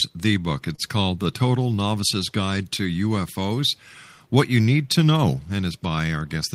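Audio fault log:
0.75 to 0.80 s, short stall from a late packet: the speech briefly hangs, one sound held about 26 ms too long with a faint buzzy or slightly dipped texture, then it carries on with nothing skipped. A packet arrived after its playout time, so the jitter buffer ran dry and the receiver stretched the last audio to cover the gap. Once the packet landed, playback resumed from the same point, leaving everything after it about 26 ms later.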